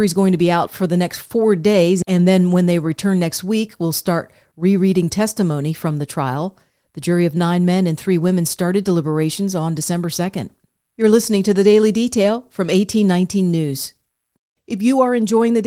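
No technical fault can be heard in this speech recording. The Opus voice compression leaves only a light coding texture and keeps the full audio band, consistent with hybrid mode at a bitrate around 20 kbps.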